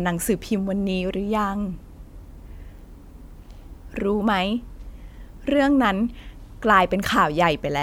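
Listening to this speech recording, nothing stood out as a technical problem at any point.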